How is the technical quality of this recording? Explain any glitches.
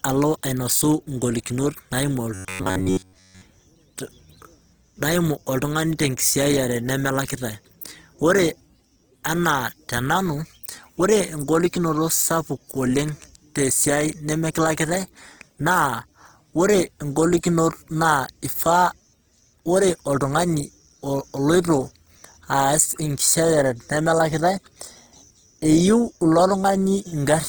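The recording has plainly audible codec damage throughout, plus one stretch of robotic sound from repeated short buffers.

Opus compression runs through the whole clip. The speech has a noisy, rough, grainy texture where cleaner tone would be expected, while the full audio bandwidth is kept. This is likely Opus in its CELT music mode at a low rate, around 16 kbps. When bits run short, that mode keeps each band's energy but fills band detail with folded copies of lower bands or with noise, so the fine structure turns granular.

From 2.34 to 3.42 s, just after "alo ainosi igolikinot naimu", the sound becomes a rigid, metallic buzz at 93.8 Hz that follows the speech only loosely. The likely cause is playback starved of new audio, so it kept repeating its last short buffer while the real material was skipped. Most of that stretch is repeated rather than new audio. A buzz at 93.8 Hz fits a buffer about 10.7 ms long.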